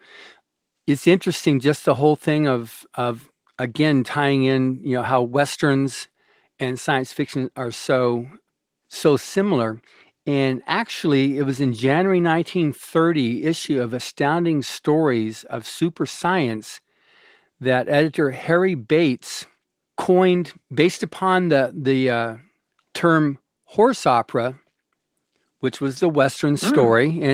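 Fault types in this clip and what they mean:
No faults can be heard anywhere in this speech.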